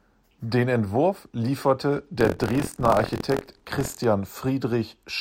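Buffer tearing runs from 2.16 to 4.05 s. The writing and reading positions in the speech's ring buffer have slipped, so around a sixth of each period replays audio about 50 ms stale. The hard joins give a 43.1 Hz robotic rattle, which fits a 1024-sample buffer.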